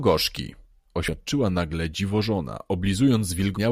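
At 1.07 s and again from 3.55 to 3.58 s, damaged data in the compressed stream corrupts the frames there, so the decoder misreads them and resynchronises. Each is brief.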